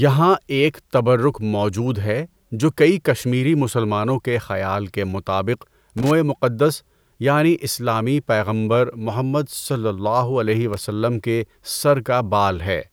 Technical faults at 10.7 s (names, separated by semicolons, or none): loose connector crackle